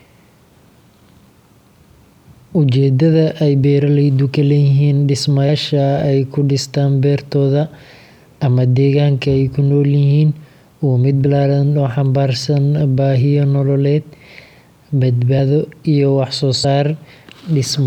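Whole compressed frames, each about 26 ms, were dropped, so the speech jumps ahead with a brief smeared blip at 5.48 s before "ay ku dhistaan beertooda", at 11.25 s before "oo xambaarsan baahiyo", and at 15.38 and 16.63 s, losing roughly 50 to 100 ms each time.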